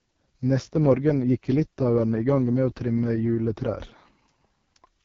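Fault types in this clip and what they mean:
AMR wideband (HD Voice) codec: Speech passes through a low-rate wideband phone codec, which fits about 6.6 kbit/s. It sounds rough and raspy throughout, with nothing above 7.2 kHz.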